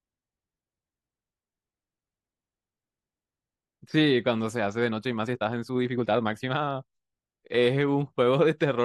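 From 4.76 to 6.90 s, the speech runs abruptly faster, about 1.47 times normal pace, while pitch stays unchanged. This is a time-stretched section. Software likely squeezed it by dropping short pieces, so it sounds rushed.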